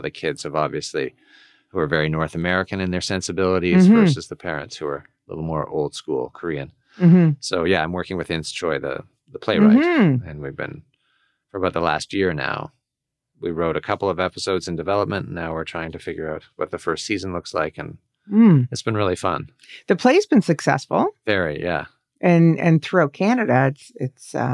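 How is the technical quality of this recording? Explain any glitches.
No glitches turn up anywhere in the recording; the speech signal stays continuous and steady in level, timing and tone throughout, with nothing that points to a fault in the recording or playback chain.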